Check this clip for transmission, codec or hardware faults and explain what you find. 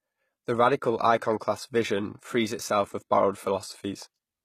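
One codec fault runs through the whole clip: low-bitrate audio saved at a high bitrate. Nothing in the speech reaches above about 14.9 kHz, yet the damage sounds heavier than a cut-off that high would suggest, with the smeared, swirly texture of very aggressive compression. That mismatch sets it apart from a single low-bitrate encode, where the cut-off and artefacts rise and fall together. The likely cause is speech squeezed by a very low-rate codec such as HE-AAC around 20 kbit/s, then re-saved as a larger MP3 that preserved the losses but could not restore anything.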